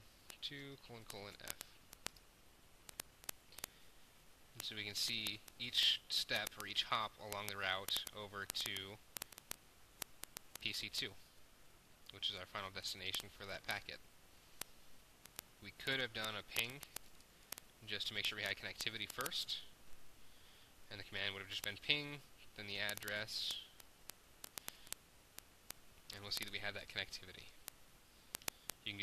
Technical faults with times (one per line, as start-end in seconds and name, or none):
0.12-29.02 word clock ticks